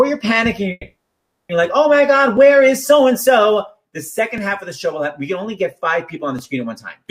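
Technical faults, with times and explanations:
0.71–1.51 s, call audio freeze: the sound stalls and its last moment is stretched into a fading buzz for about 0.78 s, ending in a brief 30 ms silence. Playback then resumes where it stopped, running 780 ms later, likely because delayed packets emptied the jitter buffer.
2.37 s, 4.38 s, 6.39 s, overlapping chunks: a click or stutter recurs every 2 s because each 2-second block begins before the previous one finishes, so about 7 ms of audio is played twice at every join.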